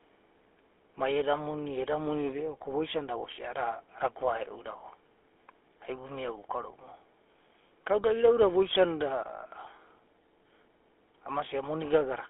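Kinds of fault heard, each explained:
GSM full-rate codec: The speech has a plainly audible buzzy, gravelly roughness and a thin, boxy tone confined between 300 Hz and 3.4 kHz. Early GSM coding models the vocal tract and drives it with a sparse pulse excitation, at a rate that fits 13 kbps full-rate coding.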